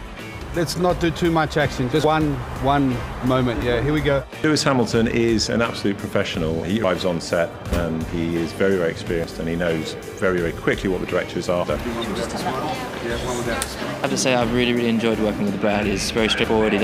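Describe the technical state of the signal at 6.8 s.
At 6.84 s, roughly a tenth of a second vanishes and the sides butt together, likely audio missing between chunks of 2.5 s; the waveform shows an abrupt seam and the spectrogram a sharp vertical discontinuity.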